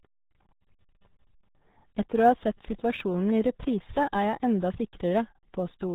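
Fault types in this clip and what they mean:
RealAudio 14.4 codec: The speech sounds muffled, boxy and gargly throughout, with a watery, smeared quality on every syllable and nothing left above about 3.8 kHz, so consonants like s and f lose their edge. This is RealAudio 1, the 14.4 dial-up speech codec, squeezing the signal into 8 kbit/s. That forces a narrow bandwidth and a coarse model of the voice, and here the damage is heavy.
sample clock jitter: A faint grainy hiss rides on top of the speech, growing on louder, brighter moments and falling away in the pauses, at a level of roughly 45 dB below the signal. The converter's clock wobbles by something on the order of 2 microseconds, so each sample is taken a little early or late. The resulting error is largest where the waveform changes fastest and disappears when there is no signal.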